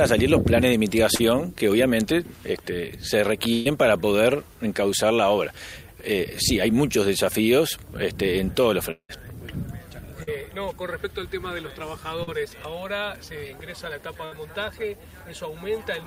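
Short concealed packet loss at 1.15 s: about 40 ms of audio never reached the decoder in time, and the receiver covered the hole by extending the preceding sound for roughly 36 ms before blending back into the real signal. It registers as a brief smear or wobble, and a short sound may drop out.

Burst of packet loss at 3.53 to 3.67 s: about 120 ms of consecutive data was lost or arrived too late. The receiver stretched the last sound across the whole gap while lowering its level, so a held buzz or fading hiss replaces the material, then the audio picks up further along with that stretch gone.

Long network dropout at 8.91 to 9.11 s: this is likely a network dropout. The concealment carries the last sound for about 176 ms, fading as it goes, then leaves about 80 ms of silence before the audio returns, with roughly 180 ms missing.

Short concealed packet loss at 10.23 s and 12.23 s: the same kind of roughly 40 ms gap as at 1.15 s. 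Each is bridged by continuing the prior sound and crossfading back, and each sounds like a brief wobble.

Burst of packet loss at 14.25 to 14.33 s: a shorter run of losses, about 60 ms. Concealment holds and fades the last sound for about 65 ms before the signal resumes, skipping the lost portion.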